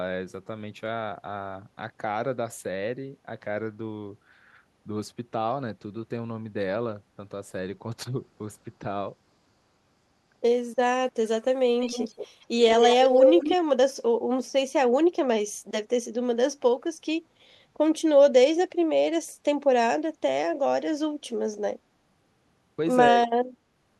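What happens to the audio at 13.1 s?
An echo leak runs from 12.7 to 13.57 s: a copy of the speech returns 175 ms late, a little louder than the original, likely from a loudspeaker the echo canceller missed. On a spectrogram the harmonic patterns appear twice, offset by 175 ms.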